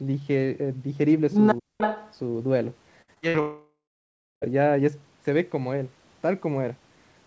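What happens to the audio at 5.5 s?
Nothing goes wrong at 5.5 s: the speech passes through intact there, carrying only the usual band limit of the call path, with nothing above 8 kHz.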